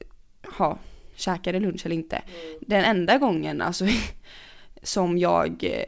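No technical faults can be heard anywhere in the speech. The call path is working as it should, and its band limit shows in the absence of any content above 8 kHz, which fits a wideband codec such as G.722.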